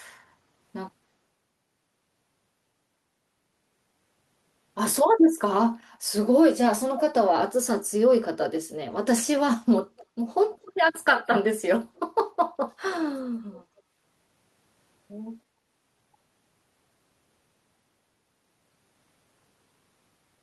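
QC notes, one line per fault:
5.94–5.98, 10.66–10.72, 11.95–11.99 and 13.52–13.82 s, echo leak: a faint repeat of the speech trails it by about 0.29 s, very faint at 5.94 s, clearer at 10.66 and 13.52 s, likely loudspeaker sound the far-end canceller failed to remove.
11.89–11.95 s, background gated by the echo canceller: the room tone briefly dips by about 10 dB for roughly 70 ms, then returns, because the canceller turned the microphone down hard while the loudspeaker was playing, just before the 11.95 s echo.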